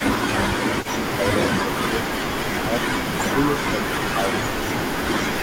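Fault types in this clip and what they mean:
Speech suppressed in double talk: the speech level sags and thins, by roughly 20 dB in a brief dip at the very start and around 15 dB through 0.52 to 4.31 s, about two seconds affected, likely from an echo canceller ducking the talker along with the loudspeaker echo while the two overlap.
Echo leak: a faint copy of the speech trails it by 363 ms at roughly 20 dB below, from 0 to 1.14 s and again from 1.5 to 5.35 s, likely residual loudspeaker pickup that the loudspeaker side's echo canceller failed to remove.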